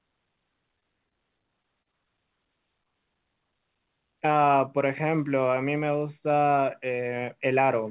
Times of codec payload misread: none

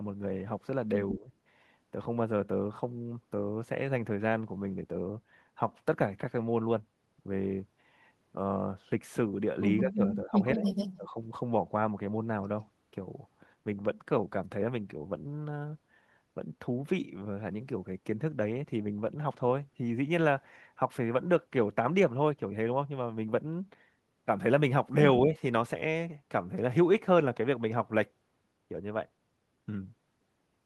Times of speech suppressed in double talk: 1.15-1.30, 9.82-10.66, 10.97-11.17, 25.21-25.35

